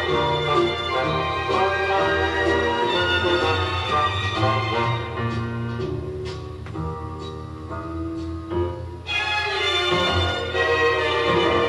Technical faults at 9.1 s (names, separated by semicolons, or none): none